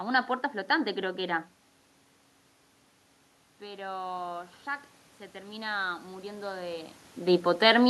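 At 3.59 s the level at the microphone falls by about 15 dB, and the automatic gain rising begins. The gain control climbs by about 4 dB over one second, to 4.59 s, lifting the voice and the room noise together. It happens again from 5.32 s to 7.02 s, a slower ramp with the same 4 dB rise. On a waveform the envelope widens steadily across each span. A spectrogram brightens evenly at all frequencies, including the noise floor between syllables.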